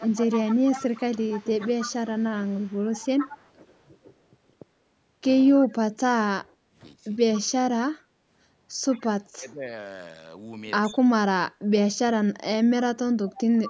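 Echo leak from 0.0 to 3.5 s: a faint copy of the speech trails it by 114 ms at about 15 dB below, likely a far-end loudspeaker echo the canceller failed to remove. Brief echo leak returns at 5.57 s, about 20 dB down, the same 114 ms copy, likely from the same incomplete cancellation.

Speech suppressed in double talk from 6.48 to 7.52 s: the speech dips by up to about 20 dB in pieces totalling roughly 0.4 s, likely the echo canceller turning down both sides while they overlap. Within it, at 7.34 s, another echo leak appears, about 20 dB down.

Echo leak at 8.91 to 9.07 s, about 25 dB down, again delayed by 114 ms. Speech suppressed in double talk follows from 9.19 to 11.09 s, with drops of up to about 25 dB totalling roughly 0.7 s, likely caused by the same overlap handling. Echo leak slips through at 10.83 to 10.94 s, about 25 dB down.

Echo leak returns from 13.37 s to the end at about 15 dB below the speech, the 114 ms delayed copy again.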